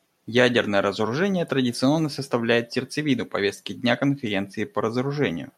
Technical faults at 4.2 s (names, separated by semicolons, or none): none